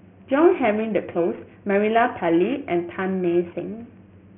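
Speech, with aliasing throughout. It was downsampled without low-pass filtering first, so energy above 3 kHz folds back into the band. Sibilants turn gritty and metallic. The fold points to a drop from 16 kHz to 6 kHz. The aliases sit roughly 20 dB below the speech.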